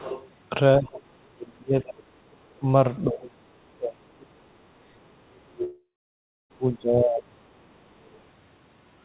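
From 0.00 to 0.28 s a second voice sits under the speech at about 15 dB below it. It returns faintly at 0.94–0.99 s, 2.31–2.59 s, 3.24–3.30 s and 8.04–8.21 s, at about 25 to 40 dB down. This is the other side's voice leaking through, likely loudspeaker echo the canceller left in the microphone signal. Between 0.78 and 2.03 s, and again from 2.59 to 7.37 s, the speech repeatedly dips and breaks up, sinking by up to about 30 and 35 dB. That adds up to roughly one second and three seconds of affected audio. This is speech suppressed in double talk: with both ends talking, the echo canceller likely could not tell the talker from the echo and turned both down. At 5.64 s a continuation of the last sound fades into silence for about 0.66 s, and the audio resumes at 6.52 s with about 0.86 s missing. This is a long network dropout, likely packets that never arrived, bridged by the receiver's concealment.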